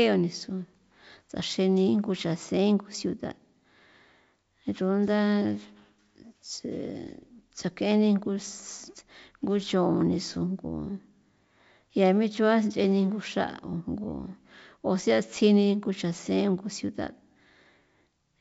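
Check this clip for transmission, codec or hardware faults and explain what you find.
Nothing is amiss with the signal: the speech arrives over G.722 wideband telephone coding at 64 kbit/s, keeping its wideband character, with any trace of the coder's upper-band hiss faint at most.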